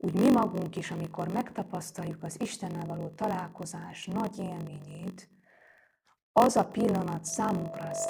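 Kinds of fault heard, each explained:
Block size mismatch (padded): one stage hands over blocks shorter than the 1024 samples the next stage reads, so each block ends in a run of zeros. The gaps recur at 46.9 Hz, heard as a steady buzz under the speech for the whole clip, which also runs at 0.938 times normal speed with its timbre kept. On a waveform, regular flat dropouts appear in every block, and on a spectrogram, thin vertical gaps form a comb at the block rate.
Loudspeaker feedback squeal: the microphone picks up its own loudspeaker, and at one frequency the loop gain rises above one, so that frequency keeps feeding itself. Here a 660 Hz tone starts at 7.27 s, right after "az a pillanat", swells over roughly a second, and runs to the end of the clip at about 5 dB above the speech. A spectrogram shows a single bright horizontal line that brightens as it grows, and the waveform envelope swells steadily.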